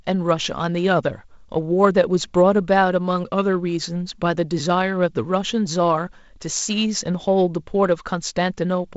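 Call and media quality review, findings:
No faults found.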